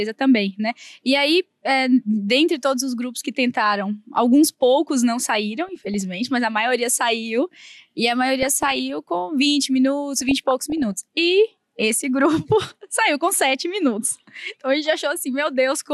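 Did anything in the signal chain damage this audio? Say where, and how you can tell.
Yes. DAB burbling at 5.68–6.29 s, 8.42–8.80 s and 10.21–10.92 s, from the reception and codec stage. Weak-signal bit errors, well under one percent, slipped past error correction into the MP2 data. Corrupted samples put short blips of noise into single sub-bands.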